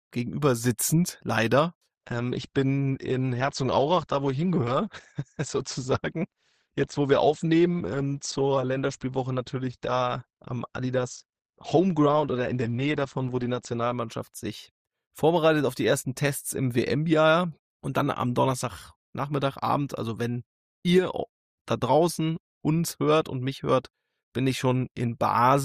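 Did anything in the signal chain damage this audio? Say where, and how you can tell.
Yes: at the network stage the adaptive stream dropped to a lower bitrate from 1.95 to 13.95 s. Treble abruptly stops at 8.5 kHz and artefacts rise without any gap, pointing to Opus at roughly 16 kbit/s.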